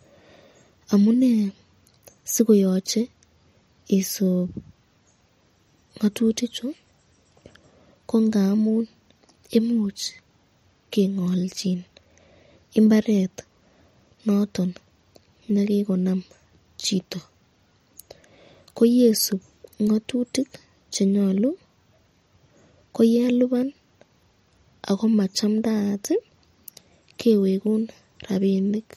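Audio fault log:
Throughout, MP3 compression: watery, swirly speech with chirpy s sounds and dull treble, nothing above 16.5 kHz, likely from a low bitrate encode around 48 kbps.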